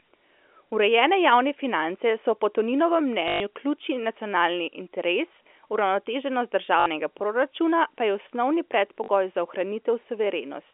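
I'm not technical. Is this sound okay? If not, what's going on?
No. The speech has three short robotic stutters, caused by packet loss with last packet repeated. Bits of the audio went missing in transit, so the receiver replayed the last piece it had until new audio arrived. It happens at 3.28 to 3.4 s, just before "ključni nacionalni interes uravnoteženost", at 6.8 to 6.86 s, just before "proračuna pa je osnovni", and at 9.04 to 9.08 s, just after that phrase. Each gap is brief, from 40 to 120 ms, and sounds like a buzz.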